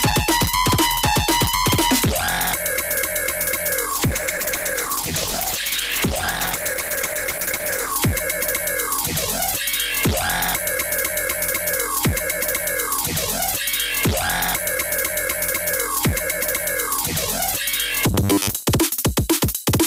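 From 3.9 to 8.02 s the audio turns coarse and muffled. The top end is dulled and the texture grows rough and watery, staying at its worst for about four seconds before clarity returns. This is a call bitrate drop. The connection's bandwidth estimate fell, and the encoder was pushed to spend far fewer bits, which fits a fall from 48 to 12 kbps. At that rate the codec quantises coarsely and discards the high frequencies until the rate recovers.

Between 18.14 and 18.63 s the sound takes on a stiff, metallic buzz at 100 Hz that still loosely tracks the underlying audio. This is robotic sound from repeated short buffers, likely caused by audio arriving too rarely. To cover the gaps, the playback side keeps replaying its most recent fragment, here about 10 ms long, which sets that fixed buzz pitch. Roughly half of the real audio in this stretch is replaced by repeats.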